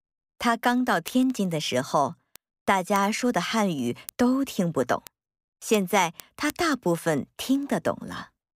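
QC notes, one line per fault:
0.17–8.53 s, word clock ticks: a steady train of sharp little ticks, roughly fourteen a second and about a hundred in all, uneven in strength. The receiving clock drifts against the sender's by something like 300 ppm, so each slip drops or repeats one sample.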